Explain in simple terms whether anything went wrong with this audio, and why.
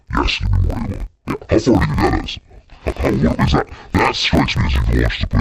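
Something went wrong for the whole clip, from start to finish. The fault is interleaved audio read as planar. Stereo audio stores left and right samples alternately. Here each block was split in half instead, so every half plays stretched to twice its length. The speech sounds an octave lower, doubled and choppy. The choppiness repeats about 47 times a second, once per block of about 21 ms, which fits a 1024-sample block.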